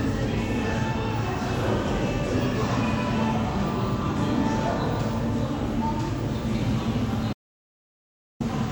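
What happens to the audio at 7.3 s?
At 7.33 s an audio dropout to silence cuts the sound until 8.40 s, likely lost input writing silence. Unlike gating, no room tone remains.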